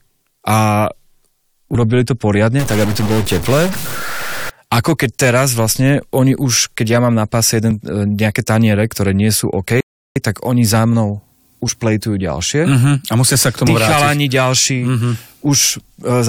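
From 2.59 to 4.50 s the speech becomes distorted, and the pauses in that stretch fill with hiss. The cause is likely a stuck bit in the converter or data line. Unlike clipping, the distortion persists at low levels, because small samples crossing zero flip that bit too.

At 7.71 s and again at 9.70 s the speech skips forward abruptly, losing around 15 ms each time with no silence at the joins. That points to audio missing between chunks, likely dropped as 2-second blocks are handed over. The even spacing distinguishes it from random dropouts.

From 9.81 to 10.16 s a rebuffering stall occurs: the sound cuts to silence for 354 ms, then resumes exactly where it stopped. Unlike the chunk gaps just before, nothing is missing. The stall only adds time, leaving an unnatural pause in the speech.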